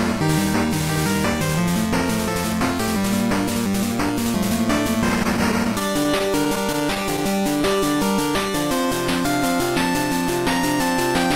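From 5.23 s to 7.65 s the audio falls into repeated stalls, a stutter: packets kept reaching the receiver late, so its jitter buffer ran dry 18 times. Each stall was bridged by continuing the last sound for a few milliseconds, at most 14 ms, adding 185 ms in total and covering about 8% of that stretch. Nothing is lost, but the sound hitches and drags. On a waveform, short repeated cycles interrupt the envelope. On a spectrogram, brief horizontal stretches of held frequency content appear at irregular intervals across the span.

Overlapping the end of the stutter, from 7.41 s to 7.96 s, comes a jitter buffer slow-down. With the buffer still short of reserve, the receiver repeated single pitch periods and slivers of quieter passages to rebuild it. That added 37 ms and ran the audio at 95% speed with the pitch unchanged, so sounds stretch slightly and can waver. A waveform shows near-identical periods repeated back to back. 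A spectrogram shows harmonics drawn out horizontally at constant frequency rather than shifted.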